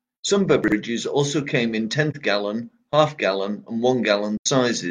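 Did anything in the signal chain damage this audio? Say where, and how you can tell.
Yes, two things. First, chunks out of order at 0.64 to 0.72 s, just before "also came in". A 40 ms chunk landed one slot late in the buffer or packet stream, so the audio jumbles briefly at the hard joins. Nothing's missing, it's just shuffled.

Second, AAC frame loss with muting in the codec stage: a soft-edged dropout at 2.10 to 2.16 s, right after "also came in", about 43 ms long, and a longer one at 4.37 to 4.47 s, around 85 ms. The decoder zeroed the missing spectrum, and the overlapping windows fade the sound out and back in.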